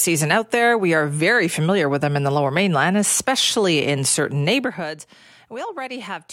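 Zipper noise runs from 4.54 to 4.92 s, as the speech level drops by around 10 dB in 1 dB jumps instead of a smooth ramp. Each jump, arriving roughly fifty times a second, leaves a tiny click, so the fade carries a buzzy ticking.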